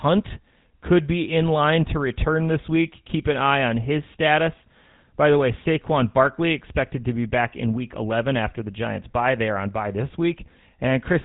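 Across the whole speech clip the GSM full-rate codec is plainly audible: the speech has a buzzy, gravelly roughness, which fits the 13 kbps GSM full-rate codec. That codec rebuilds the speech from a vocal-tract filter fed by a coarse, thinned-out pulse train, so fine detail in the excitation is lost. A spectrogram would show a hard ceiling at 3.8 kHz with nothing above it, and grainy, smeared harmonics below.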